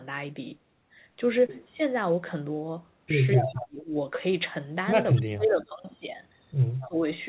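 From 3.35 to 3.67 s there is an echo leak: an echo canceller likely let loudspeaker pickup through, sending back a copy of the speech 232 ms late at only about 5 dB below the talker, heard as a doubled, smeared voice. Overlapping it, from 3.36 to 3.91 s, speech is suppressed in double talk: the canceller likely could not separate the talker from the echo and turned both down, so the voice dips by roughly 25 dB for about half a second. The same pair likely recurs. Echo leaks at 5.15 to 5.22 s and 6.80 to 6.88 s return at the same 232 ms delay, around 20 dB down, as brief ghostly scraps. Each is followed by suppression, from 5.19 to 5.72 s with a dip of about 30 dB, and from 6.84 to 7.04 s with a dip of about 20 dB. Throughout, nothing sounds above 4 kHz, which fits a G.711 telephone-band call path.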